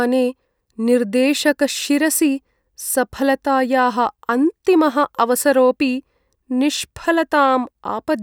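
No technical faults can be heard in this recording.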